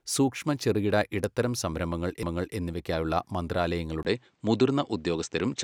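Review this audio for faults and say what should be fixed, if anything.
A CD skip at 2.23 s: the laser jumped tracks, giving a tiny mute and a tick, then the speech resumes from elsewhere on the disc. Unlike a plain dropout, the content jumps. Clean the disc and isolate the player from knocks.

From 4.03 s the sound dulls after a 20 ms silence, with nothing above 8.5 kHz and a faint new noise floor at a similar level, likely an input switched to a poorer device. Unlike filtering, the tone and noise change together. Lock the recording input so it cannot change mid-take.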